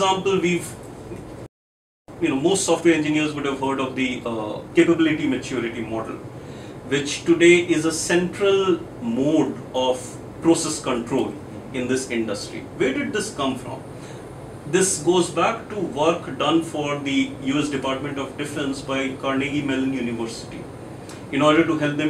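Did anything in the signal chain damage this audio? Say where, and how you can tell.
Yes. At 1.46 s the sound cuts out mid-flow and stays silent for about 0.62 s, picking up again at 2.08 s. That's a playback stall, a playback-stage problem, and it's likely that the player either ran dry of buffered data or had its thread blocked, so nothing was written to the output until it recovered. A clean stop and restart with dead air between points to the player rather than the source.

Right after it comes back, from 2.08 s to 5.08 s, the audio runs hurried at about 1.15 times normal speed, yet the pitch stays where it should be. That's time-compressed catch-up, also at the playback stage. Having fallen behind during the stall, the player trims its backlog by dropping small slices and cross-fading across the joins. That shortens the timeline without resampling, which is why the pace rises but the pitch doesn't.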